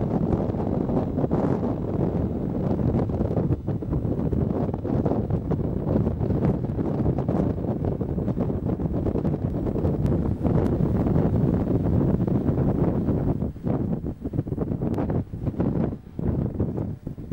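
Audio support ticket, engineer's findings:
Doubled audio track, 9.50–13.34 s. Full-band second copy trails about 0.7 s behind at roughly equal level. Single repeat with no decay or room colour, switching on and off abruptly, unlike acoustic echo. Likely a slower second capture path or out-of-step edit copy.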